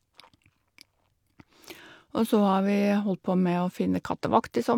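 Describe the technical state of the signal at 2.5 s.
At 2.5 s the speech signal is intact, with no audible technical fault.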